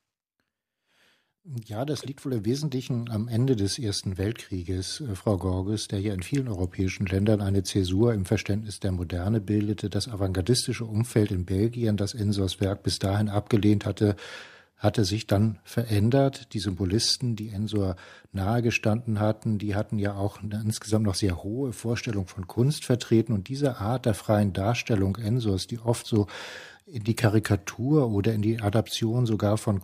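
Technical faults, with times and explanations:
Nothing stood out as a technical problem on listening to this speech recording.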